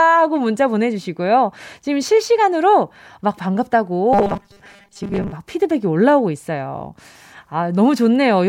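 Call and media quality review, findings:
Robotic sound from repeated short buffers, 4.13–5.32 s. Likely playback/jitter buffer starvation: concealment loops last 5 ms segment while most real audio is skipped. Loop imposes rigid 200 Hz buzz; speech becomes metallic buzz, loosely following the original.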